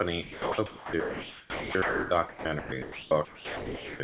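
Speech gives way to steady hiss at 0.22–0.58, 0.66–2.11, 2.29–2.45, 2.59–2.72, 2.82–3.11 and 3.25–4.0 s, then returns. These are sounds dropped by the voice detector: the sender likely judged quiet speech to be background, stopped transmitting, and the receiver filled with comfort noise.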